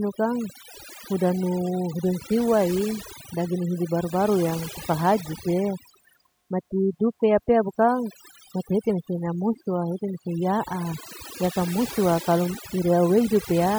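From start to finish the speech carries overdone noise removal. A noise reducer set too aggressively has pulled down any frequency band sitting close to its noise estimate, taking the quieter parts of the voice along with the background noise. Pauses fall to near silence sprinkled with twinkling specks. On a spectrogram the background appears as dark gaps dotted with isolated flecks, and the speech harmonics look patchy and broken.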